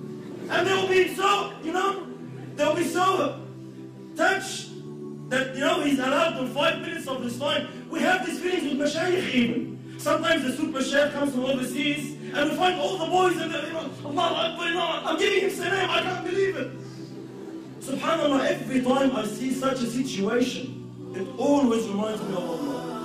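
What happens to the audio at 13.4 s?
Nothing goes wrong at 13.4 s: the audio carries on intact through that moment with no dropout, click or glitch.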